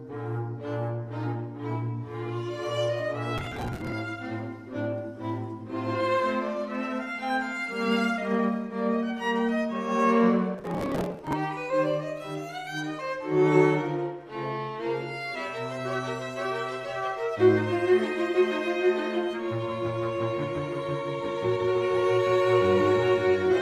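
Around 3.38 to 3.92 s, and again from 10.55 to 11.33 s, there's processor overload crackle: the system keeps missing deadlines on short buffers of around 5 ms and skips them, so the sound is chopped by a rapid run of tiny hard-edged gaps that come across as gritty tearing.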